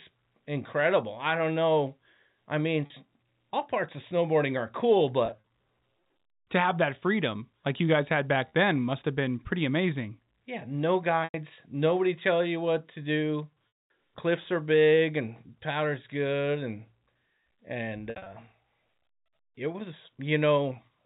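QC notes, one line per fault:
2.86 s and 8.48 s: packet loss with pitch repetition. About 40 ms goes missing after "don't know I mean" and "like you guys had", producing a brief held, buzzy tone.
5.26–5.43 s, 11.24–11.34 s, 13.71–13.90 s, 18.10–18.26 s: same fault, with longer or scattered gaps of up to 220 ms, after "you what to do". The repeated period fades toward silence, then cross-fades back.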